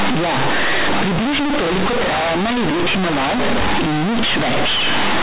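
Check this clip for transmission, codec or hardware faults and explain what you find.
One fault runs through the whole clip. Companded audio is read as linear: mu-law bytes play as plain 8-bit samples without expansion. Each sign change swings the output across half its range. Quiet speech becomes as loud as loud speech, giving harsh, buzzy distortion and strong noise in pauses. The G.711 telephone coding itself keeps its 4 kHz limit.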